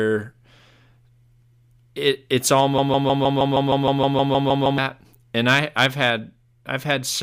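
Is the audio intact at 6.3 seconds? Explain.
Yes, the speech runs without any audible fault at 6.3 seconds, with no break, click, dropout or distortion at that moment.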